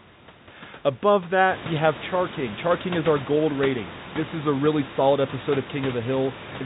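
Nothing in this speech recording is technically at fault: the room's background noise, which rises by about 14 dB at roughly one and a half seconds and then sits about 16 dB beneath the speech, belongs to the original acoustic scene, and the band-limited, slightly grainy character, with nothing above 4 kHz, is simply what ordinary G.711 telephone coding sounds like.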